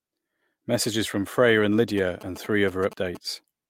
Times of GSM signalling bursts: 1.98-3.17

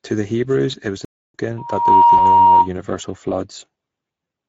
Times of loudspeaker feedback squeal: 1.57-2.69

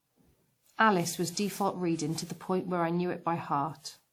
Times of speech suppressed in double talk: none

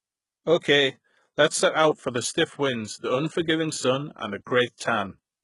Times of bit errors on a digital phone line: none

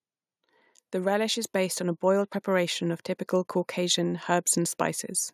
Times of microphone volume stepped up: 1.44

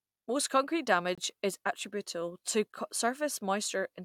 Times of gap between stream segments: 1.15-1.18

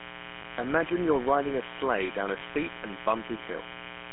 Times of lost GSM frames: 0.42-0.45, 2.38-2.41

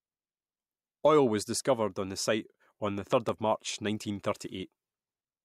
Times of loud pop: 3.13-3.31

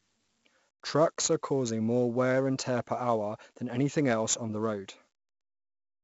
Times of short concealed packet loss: none

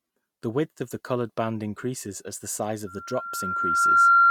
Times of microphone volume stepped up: none

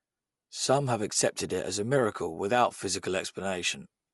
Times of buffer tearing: none

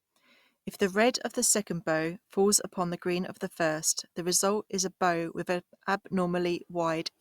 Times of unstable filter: none

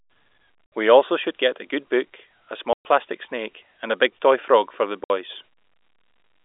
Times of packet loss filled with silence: 0.66-0.72, 2.73-2.85, 5.04-5.10

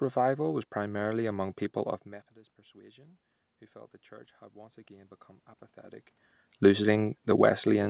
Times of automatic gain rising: 2.72-5.21

